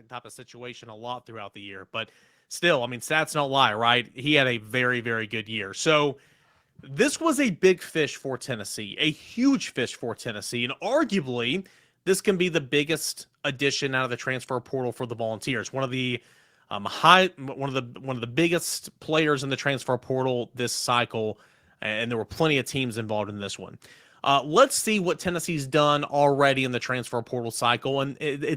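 From about 0.5 s the level starts creeping upward, and it keeps climbing until around 11.31 s. That's automatic gain rising: the gain control decided the input was too quiet and slowly turned itself up, by about 13 dB in total. Because it's acting on the whole signal, the speech and the background noise swell together, so you hear the room get louder right along with the talker over those ten-odd seconds.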